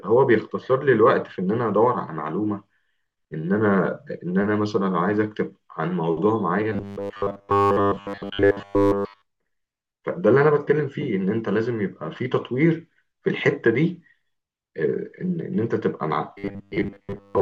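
Robotic sound from repeated short buffers at 6.73 to 9.22 s and 16.38 to 17.42 s: the speech becomes a rigid metallic buzz at 100 Hz, likely from about 10 ms chunks replayed while most of the real audio was skipped.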